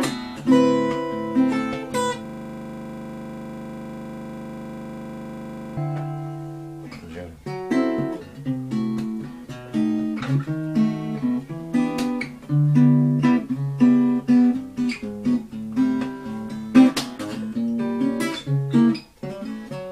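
From 2.25 to 5.77 s, a system hang loop repeats one 40 ms slice of the ring buffer, giving a rough 25 Hz buzz that shows as identical, evenly spaced blocks on the waveform and spectrogram.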